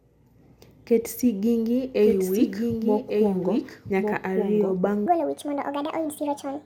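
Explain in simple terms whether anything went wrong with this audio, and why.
Two things went wrong in this speech clip.

From 2.02 to 4.78 seconds there is a doubled audio track. The same speech plays twice at once, with the second copy about a second behind and somewhat quieter. It sounds like a clean echo, with no room sound around it. It starts and stops suddenly. The likely cause is the sound being recorded a second time through a slower route, or an edit leaving two copies out of step.

From 5.06 seconds to the end, the clip has a section at the wrong speed. That part plays 1.66 times too fast. Because speed and pitch move together, the speech also jumps much higher, close to an octave up. It sounds rushed and squeaky. This is likely because that part was played or edited against the wrong timing clock.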